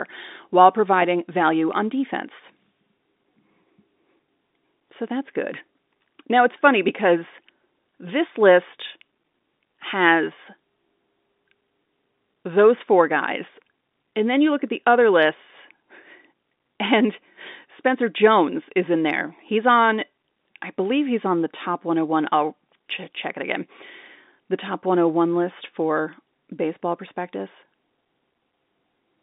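Nothing in the speech signal registers as a technical fault at any point.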